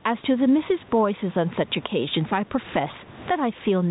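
Speech with gain pumping throughout: loud and soft parts are pulled closer in level and the sound is squashed, with the gain swinging by around 15 dB. The likely cause is gain set far too high feeding a fast limiter. On a waveform the peaks look flattened to a near-constant height. A spectrogram also shows the telephone band ending near 3.8 kHz.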